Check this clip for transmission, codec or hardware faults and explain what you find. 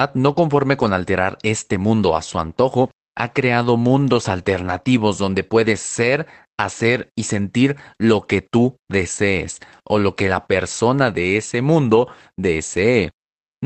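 No transmission, codec or hardware faults are audible here.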